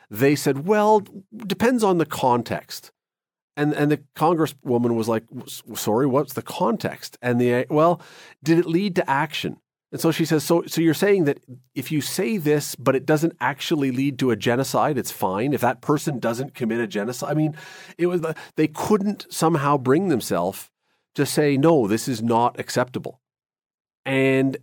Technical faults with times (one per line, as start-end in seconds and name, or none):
15.98-18.19 channel delay (comb filtering)